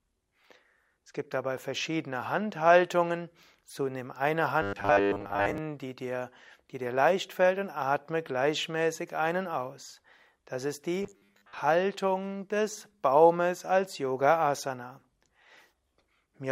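From 4.62 to 5.58 s, between "nimm eine" and "die dir die dir", the speech turns into a rigid metallic buzz at 100 Hz, and again from 11.03 to 11.61 s: robotic sound from repeated short buffers, likely caused by a 10 ms stretch being replayed while fresh audio was late, with most of the first span and about half the second filled this way. Unlike a plain dropout or stutter, the words stay roughly traceable under one fixed pitch.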